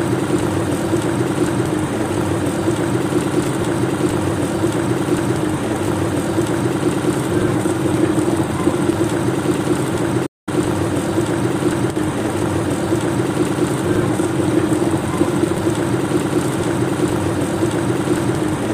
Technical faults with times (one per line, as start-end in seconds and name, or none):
3.43-3.48 loose connector crackle
10.26-10.49 playback stall
11.91-11.96 one channel drops out